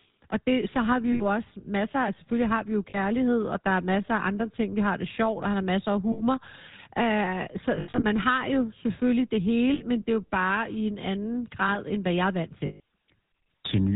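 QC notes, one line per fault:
throughout: GSM full-rate codec. The whole thing has that buzzy, gravelly phone roughness with nothing above 4 kHz, which fits the 13 kbps full-rate coder. It's rebuilding the voice from a vocal-tract model fed by thinned-out pulses, so the damage is plainly audible.
1.12–1.22, 2.90–2.98, 6.12–6.23, 7.76–8.05, 9.74–9.82, 12.66–12.80: lost GSM frames. Each gap, from 40 to 200 ms, is filled by repeating the last good frame, giving a brief metallic ring. The 7.76 one is patchy, with runs of about 70 ms at most.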